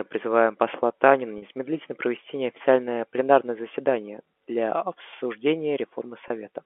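Speech over a telephone-band line, limited to roughly 250 Hz to 3.4 kHz as G.711 coding would give. The fault is packet loss with pitch repetition. At 1.38 to 1.42 s, about 40 ms of audio drops out, which fits two lost 20 ms packets. At 6.28 to 6.30 s, a 20 ms gap fits one packet. In each gap the receiver repeats the last pitch period to fill the hole. This produces a brief held, buzzy tone before the speech resumes.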